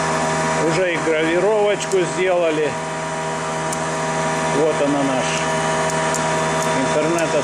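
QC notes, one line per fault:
No faults heard anywhere in this audio.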